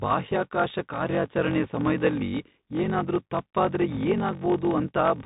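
Block size mismatch (padded), from the start of the clip to the end: one stage hands over shorter blocks than the next stage reads, so each read, which fits a 1024-sample block, is topped up with zeros. That silent stretch repeats at about 46.9 Hz and is heard as a steady low buzz under the speech. Because every block carries padding, the speech runs at about 0.86 times normal speed while keeping roughly its natural pitch.

Bluetooth CVSD headset codec, also throughout: the speech has passed through the narrowband headset codec, which fits a 64 kbit/s link. Each sample is sent as a single up-or-down bit, with an adaptive step size. Nothing above 4 kHz survives, so the speech sounds boxed-in and telephone-like. Louder, brighter sounds outrun the step size and distort, sibilants turn scratchy, and a granular hiss sits under the speech. The damage is plainly audible.

Bit errors on a Bluetooth voice link, from 1.08 to 1.14 s, just before "ಸಮಯ್ದಲ್ಲಿ ಏನಾದ್ರೂ ತಪ್ಪಾದ್ರೆ ಏನಾಗ್ಬೋದು", and again from 3.89 to 4.00 s, right after "ಸಮಯ್ದಲ್ಲಿ ಏನಾದ್ರೂ ತಪ್ಪಾದ್ರೆ": bits flipped on the CVSD link. 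The error rate is around 1.5 percent in the first burst and about 1 percent in the second. Each CVSD bit moves the signal by only one step, and the decoder leaks the error away, so there are no sharp clicks. Instead, a brief rushing, crackly noise rides over the speech.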